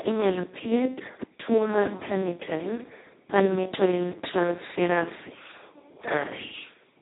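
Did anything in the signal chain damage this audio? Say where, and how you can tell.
Yes. The damage happened at the codec stage, and it runs the whole length of the speech. This is Speex codec damage, and it is heavy. The voice sounds hoarse, buzzy and close to robotic. Nothing is heard above 3.8 kHz. Speex models speech with a predictor and a coded excitation. Here almost no bits go to that excitation, which fits a setting near 2 kbps. What remains is little more than a vocoder's crude rebuild.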